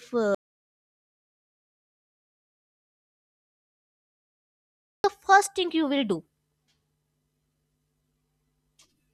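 A speech clip with an audio dropout to silence from 0.35 to 5.04 s: about 4.7 s of dead digital silence with no room tone, where the input was likely lost while recording continued. The waveform shows a flat line, and the spectrogram a fully blank band.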